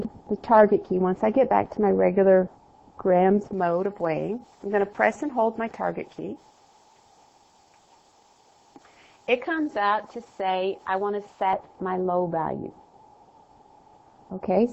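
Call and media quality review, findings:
Pre-emphasis left on, 3.53–11.53 s. Thin, bright, sibilant top end, about 11 dB up at 10 kHz relative to 1 kHz, following the J.17 curve. Receive-side de-emphasis missing. Unlike a deliberate treble EQ, the boost switches on and off.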